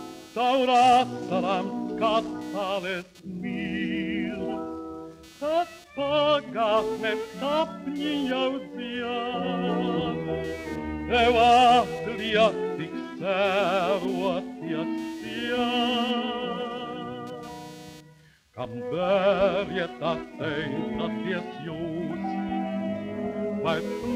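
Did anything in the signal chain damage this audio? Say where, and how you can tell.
Yes, in the analogue wiring. The audio circuit shares a ground with the computer, and as the processor, graphics card or mouse change their load, current swings in that ground and reach the signal path. The result is computer activity noise: a buzzy, chirping pulse train at roughly 300 Hz, sitting roughly 30 dB below the sound, present for the whole clip and changing with the machine's activity rather than with the audio.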